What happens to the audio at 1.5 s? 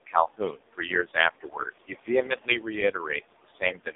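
At 1.5 s the speech falls inside a stretch of speech cut by the noise suppressor, running from 0.06 s to 2.74 s. The suppressor mistakes parts of the speech for background and pulls them down by as much as about 21 dB, roughly one and a half seconds of affected material in total, so soft consonants and word endings sound swallowed or faint.

The same processing leaves noise suppressor artifacts. The room noise, sitting about 12 dB below the speech, is attenuated by about 21 dB between phrases and comes back underneath them frame by frame.

The whole passage is also carried by an AMR narrowband mobile codec. The codec rebuilds speech from a vocal-tract model excited by a few pulses per subframe. Nothing above 3.8 kHz survives, and the heavy buzzy, synthetic coloration fits AMR-NB's lowest mode, around 4.75 kbps.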